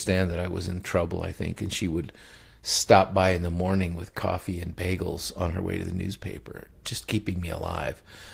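No technical faults can be heard anywhere in this speech recording. Nothing in the signal chain draws attention at any point in the clip.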